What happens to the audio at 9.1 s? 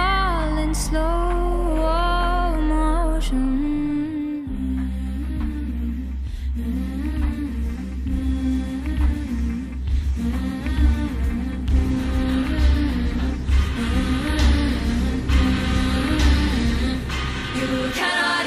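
Nothing goes wrong at 9.1 s; the audio plays through that moment intact, with no dropout, click, distortion or other fault.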